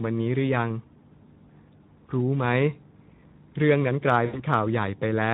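A short speech recording carries Speex codec damage throughout, plainly audible as a hoarse, noisy grain on the voice where the codec has too few bits to reproduce the excitation faithfully. The roughness fits a low-to-middle Speex setting of around 11 kbps. On a spectrogram, harmonics look smeared and broken up, and any energy above 4 kHz shows as a diffuse, noise-like wash rather than distinct structure. From 4.25 to 4.42 s comes VoIP packet loss concealed by the speech codec: about 80 ms of audio, consistent with four lost 20 ms frames, is replaced by the decoder repeating its last pitch and spectral shape at falling gain. This produces a stretched buzzy tone or coloured noise that fades, and the voice stays weakened briefly after real packets resume. A waveform shows a decaying, extrapolated stretch there, and a spectrogram shows a frozen spectral shape that fades out.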